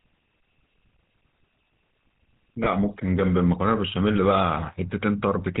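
Throughout, the speech shows plainly audible GSM full-rate codec damage: nothing above 4 kHz, plus a buzzy, gravelly pulse-driven roughness that a merely band-limited line lacks. This fits a 13 kbps stream.

From 2.64 to 2.68 s, lost GSM frames: the last good frame's settings are repeated, giving a brief metallic ring rather than a silent gap, consistent with one missing 20 ms frame.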